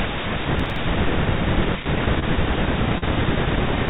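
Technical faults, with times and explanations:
0.60–0.76 s, processor overload crackle: For about a sixth of a second the audio tears into gritty crackle. The processor missed several very short buffer deadlines in a row, which fits buffers of under a millisecond, and each missed block was skipped outright. Every skip splices the sound with a hard edge. On the waveform these show as small discontinuities and steps. On the spectrogram they appear as thin vertical broadband streaks that stop as soon as the load eases.
2.20–2.24 s and 2.98–3.04 s, short concealed packet loss: Two brief smears interrupt the speech. About 20 ms and then about 40 ms of audio never arrived in time. The receiver covered the gaps with 23 ms and 38 ms of sound extrapolated from what came just before, then blended back into the real signal. On a spectrogram the fill looks unnaturally steady, with frozen or stretched patterns and no fine detail. 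Both patches sit within the call's band, which shows nothing above 4 kHz.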